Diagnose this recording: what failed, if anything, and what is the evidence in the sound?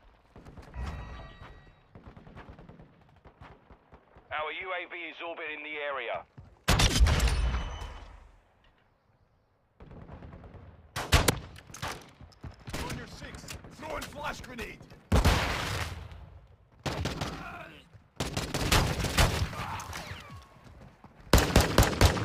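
The converter stage failed, with sample clock jitter from 13.8 s to 21.8 s. A hiss-like roughness rides on the sound there, about 20 dB below it. The unstable clock shifts each sample by several microseconds. The error grows where the waveform changes fastest.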